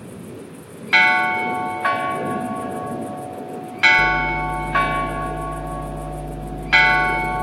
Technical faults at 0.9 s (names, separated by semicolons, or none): none